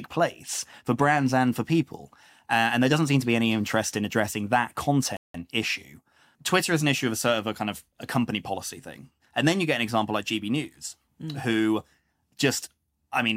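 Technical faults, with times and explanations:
5.17–5.34 s, playback stall: just after "interest in addressing that", the speech cuts to silence for about 0.18 s before carrying on. The output path simply stopped delivering samples for that interval. The likely cause is the player's buffer running dry or its audio thread being blocked briefly, leaving nothing to send to the output until it recovered and resumed the stream.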